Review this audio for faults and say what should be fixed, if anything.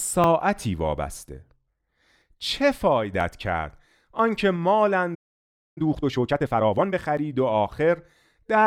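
Periodic USB or driver dropouts run from 0.24 s to 8.16 s, one roughly every 0.99 s, about ten in all. Each time something blocks the audio path and roughly 10 ms of speech is skipped outright, leaving a regular tick wherever there is signal.

A playback stall silences the output from 5.14 s to 5.78 s, a gap of about 0.62 s, cutting the speech off mid-flow. The likely cause is the player running dry of buffered data or its thread being blocked until it recovered.

Time-compressed catch-up follows from 5.78 s to 7.00 s, with speech running about 1.5 times fast at normal pitch. The player is trimming its backlog by removing small slices and cross-fading the joins, which gives a hurried quality.

To prevent these, find and stop the background task that blocks the USB bus or driver about once a second, and give the player a larger, higher-priority buffer so it neither starves nor has to race to catch up.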